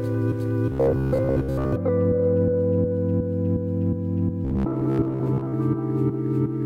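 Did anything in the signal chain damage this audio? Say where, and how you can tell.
Yes. From 0.72 to 1.73 s and from 4.45 to 5.55 s, the sound becomes a rigid, metallic 66.7 Hz buzz. This is robotic sound from repeated short buffers, likely at the driver or buffer stage. A 15 ms block keeps replaying while most real audio is skipped.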